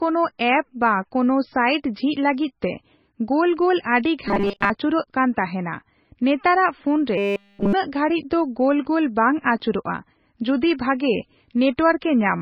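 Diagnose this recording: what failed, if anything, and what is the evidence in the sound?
The codec stage is the likely culprit for damage running through the whole speech clip, consistent with MP3 compression. The sound has a watery, swirling texture where weak frequency lines drop in and out between frames. Consonant attacks are smeared. Damage this heavy fits a very low bitrate, around 18 kbps, where the encoder starves the treble first.

The second fault sits at the driver or buffer stage: robotic sound from repeated short buffers, heard from 4.28 to 4.70 s (after "ᱜᱳᱞ ᱟᱹᱰᱤ", before "ᱟᱹᱪᱩᱨᱚᱜ ᱠᱟᱱ ᱛᱟᱦᱮᱱᱟ") and from 7.18 to 7.73 s (after "ᱱᱮᱛᱟᱨᱟᱜ ᱯᱷᱳᱱ", before "ᱜᱷᱟᱲᱤᱡ ᱫᱚ ᱜᱳᱞ ᱜᱳᱞ"). Both carry a rigid 200 Hz metallic buzz, which fits a 5 ms chunk being looped while fresh audio is skipped. Most of the first stretch is repeated, and all of the second.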